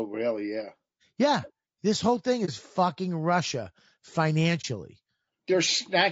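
Throughout, the speech sounds rough and grainy. Noise fills the gaps between the voice's harmonics, and the top band sounds thin and synthetic. This is likely low-delay AAC compression at a low bitrate, which fits about 32 kbps. Its short frames resolve pitch poorly.

At 2.45 to 2.50 s, just after "whole thing", the sound briefly drops out. It happens again at 4.61 to 4.65 s. These are AAC frame losses with muting. The decoder zeroed about 30 ms of spectrum, and overlapping windows fade it out and back in, leaving a brief dip.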